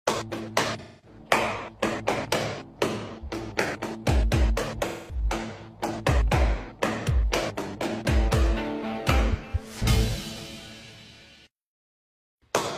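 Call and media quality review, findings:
AAC frame loss with concealment at 0.79–1.19 s and 4.87–5.24 s. Smeared, noisy patches. About 256 ms and 213 ms of audio missing, which fits runs of six and five AAC frames. The decoder refilled these gaps from the last good spectrum.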